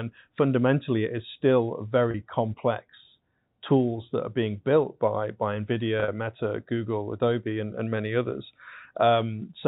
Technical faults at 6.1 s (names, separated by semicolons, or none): packet loss with pitch repetition